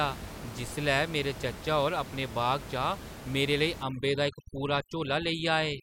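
At 3.83 s, overdone noise removal takes hold and lasts to the end of the clip at 5.82 s. The room noise, sitting about 13 dB below the speech, is what the reduction is fighting, and it is set far too aggressively: individual frequency bands near the noise estimate are pulled down or switched off, taking quieter parts of the speech with them. The background drops and breaks up into twinkling specks.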